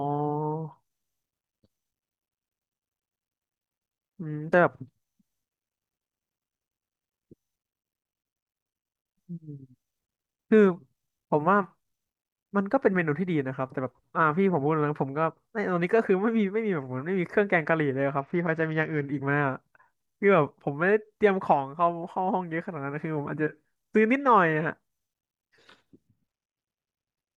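A speech clip with two Bluetooth SBC bit pool drops. The first runs from 18.18 to 19.06 s. The second starts at 26.07 s and lasts to the end. In both, the treble dulls and a gritty noise rises under the speech. The link was likely congested, so the phone cut the SBC bit pool. The sound fits a fall from about 28 to 11, near 90 kbps. With so few bits, the top sub-bands get little or nothing. The rest are coarsely quantised.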